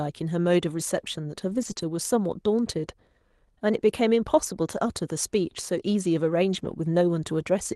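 A speech recording carried over a call path whose coding noise and top end near 12 kHz fit Opus at roughly 32 kbps, it has lost packets rebuilt from error correction: packets went missing, and the decoder played the low-bitrate copies carried in following packets. So 1.49–1.71 s, 1.77–1.83 s and 6.53–6.71 s turn rougher and noisier without any gap. Between those first two spans, a short concealed packet loss at 1.73–1.77 s left about 20 ms undelivered, and the receiver extended the preceding sound to fill it, leaving a brief smear or wobble.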